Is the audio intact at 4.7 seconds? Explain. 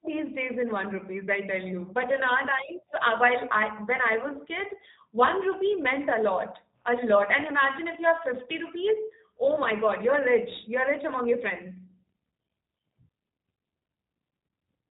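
No. At 4.7 seconds the speech carries G.729 codec damage, as it does for the whole clip. The codec discards the waveform and rebuilds each 10 ms frame from a vocal tract filter, a pitch predictor and a few pulses. The rough, slightly synthetic texture fits an 8 kbit/s stream. Nothing above about 3.8 kHz survives, so sibilants lose their edge and the voice sounds narrow and muffled.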